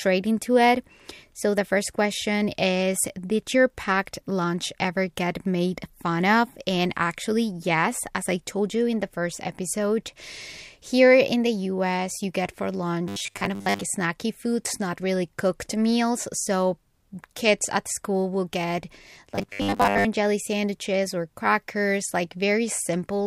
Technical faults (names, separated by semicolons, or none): robotic sound from repeated short buffers